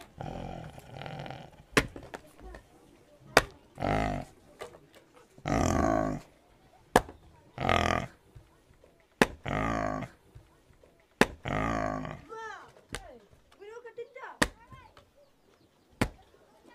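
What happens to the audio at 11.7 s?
At 11.7 s the audio is inside a stream segment repeated fault running from 10.01 to 12.01 s. The player fetched or queued the same stretch of the stream twice, so about 2.0 s of programme is played a second time. The sound jumps back with a small blip at the splice, and what you hear around 11.7 s is material that has already gone by once, delaying everything after it by roughly two seconds.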